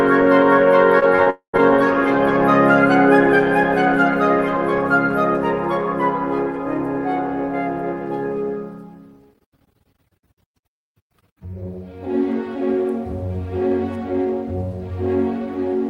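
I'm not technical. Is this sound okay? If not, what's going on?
No. From 0.99 to 1.60 s there is repeated packet loss (robotic sound): the connection lost small pieces of audio five times, each gap no longer than about 22 ms. The receiver patched each hole by stretching the previous sound, so that half-second comes out choppy with pieces missing.

Inside that stretch, from 1.30 to 1.55 s, the audio stops altogether for about a quarter of a second, likely a long network dropout. The last sound is drawn out, then roughly a tenth of a second of silence follows, and the missing part never returns.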